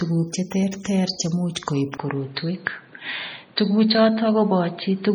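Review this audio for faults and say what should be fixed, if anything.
MP3 compression runs through the whole recording, likely from a low-bitrate encode; the heavy damage fits something around 32 kbps. Starved of bits, the encoder drops weak frequency lines frame by frame, so the speech sounds watery and swirly, with chirpy sibilants and smeared attacks. Encode at a higher bitrate or keep a lossless master.

Pre-echo occurs at 0.71 s and 1.55 s. A short hiss precedes each sharp onset by about 11 and 12 ms. The codec spread quantisation noise evenly across its block, so noise sized for the loud attack leaks into the quiet moment just before it. A higher bitrate or an encoder with proper block switching would prevent it.

Input switched to a poorer device at 1.98 s, likely a change of microphone or a headset's call profile. A 20 ms silence marks the switch. From there to the end nothing passes above 4.6 kHz, so the sound turns dull and boxy, with new background noise about 30 dB below the signal and the level roughly unchanged. 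Lock the input device before recording begins.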